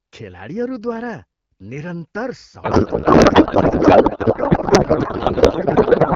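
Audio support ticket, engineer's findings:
Codec payload misread, 2.63 s to end, after "खेलाडीहरूद्वारा निरन्तर": speech becomes garbled warble barely tracking it, likely octet-aligned AMR-WB frames parsed as bandwidth-efficient. Persists unbroken, unlike packet-loss dropouts.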